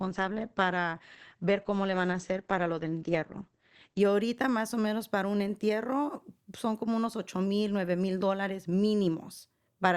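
From 0.0 to 4.0 s, the speech plays from an adaptive stream starting at a low bitrate. The player began cheaply to start fast. Nothing sounds above 8.6 kHz. Codec artefacts are stronger, which fits 12 kbit/s Opus. Before "ahorita más o menos", quality jumps without a gap.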